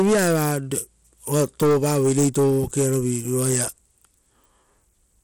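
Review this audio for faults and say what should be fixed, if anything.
The speech carries plainly audible coding damage from start to finish, and it sounds like it most likely came through Bluetooth SBC compression. The treble flickers and drops in and out, with a gritty grain and some aliasing riding on the speech. That's what you get when a sub-band codec runs short of bits: the quieter upper bands get starved and everything else is quantised coarsely. The damage fits a low bit pool, roughly 96 kbps, even though content reaches up to 19.6 kHz. To avoid it, record straight to the device or over a wired link, or use a higher-quality Bluetooth codec.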